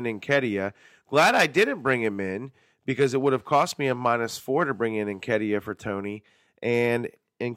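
No technical faults can be heard anywhere in the speech.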